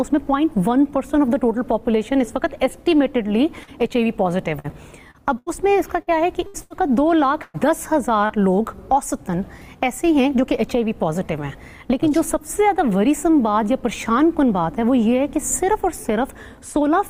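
At 3.63 s there is a brief smear, a momentary wobble where the sound seems to stretch for an instant before carrying on. This is short concealed packet loss: about 40 ms of audio arrived too late or not at all, and the receiver patched the hole by extending what it had just played, then eased back into the real signal.

From 4.59 s to 6.73 s the audio turns choppy, stuttering in six separate places. This is repeated packet loss with a robotic sound. Data went missing again and again, about 360 ms in total, with the longest hole near 81 ms. Each gap was filled by continuing the preceding sound, and because the next gap followed soon after, the patches run together into a mechanical, broken texture. About a sixth of that stretch is synthetic fill.

At 7.42 s, lasting to 7.57 s, the sound holds on itself and fades rather than dropping to silence. It then picks up further along, with a piece skipped. 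This is a burst of packet loss: roughly 120 ms in a row never arrived in time, and the concealment sustained the last sound while turning it down. It comes across as a brief held buzz or fading hiss.

At 8.26 s a second short concealed packet loss gives the same quick smear as the first, again with about 40 ms missing and bridged by extending the sound just before it.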